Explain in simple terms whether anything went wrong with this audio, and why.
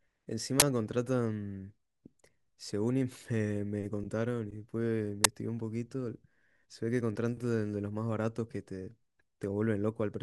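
Two sudden, harsh bursts of digital noise interrupt the speech, one from 0.60 to 0.62 s and a shorter one at 5.24 s. This is an uninitialised buffer: a chunk of audio was played before any sound was written into it, so leftover memory came out as noise. The burst lengths fit 1024-sample and 512-sample buffers.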